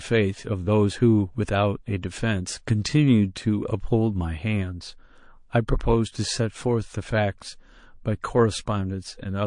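Throughout the speech, the sound is watery and swirly, with chirpy, metallic s sounds and smeared consonant attacks, likely from MP3 compression starved of bits, which fits a 40 kbps bitrate. A spectrogram shows a flat treble ceiling and high-frequency patches blinking on and off between frames.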